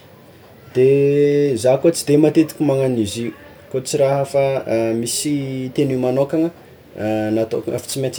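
It's a speech recording, and from about 5.80 s right through to the end at 8.19 s there's crude rate conversion: a gritty, inharmonic fizz riding on the louder and brighter parts of the speech. It sounds like samples were simply repeated to stretch the rate, probably from 44.1 kHz to 48 kHz, with no filtering. That repeating pattern throws off tones unrelated to the speech, sitting roughly 25 dB under it.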